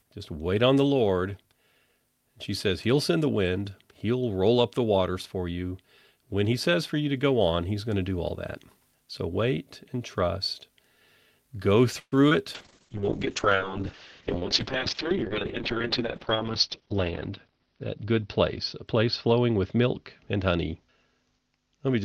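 At 11.99 s the speech stalls until 12.15 s in a call audio freeze, likely from packets held up so the jitter buffer ran dry. The last sound is stretched into a fading buzz, then about 50 ms of silence. On a spectrogram this shows as smeared horizontal bands and then a blank column, and the speech resumes about 125 ms late with nothing lost.

From 12.29 to 12.33 s a short concealed packet loss follows. About 20 ms of audio never arrived, and the decoder continued the preceding sound and blended back in, giving a brief smear or wobble. In the waveform it appears as a short, oddly smooth patch.

From 12.56 s to the end, a call bitrate drop takes the encoder from 48 to 6 kbps for about 4 s at its lowest. The audio turns rough and muffled, and the spectrogram shows content cut off at 6 kHz instead of reaching 20 kHz.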